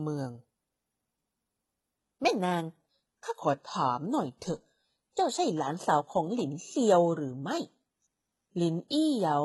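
A speech clip whose sound changes abruptly at about 1.99 s and stays degraded to the end: codec artefacts rise, yet there is no gap at the switch. This is an adaptive stream at a lower bitrate, which drops from a higher-bitrate version to a much leaner one when the connection slows. The character fits a move from roughly 96 kbit/s AAC to a 16 kbit/s HE-AAC stream that rebuilds the highs from the lower band.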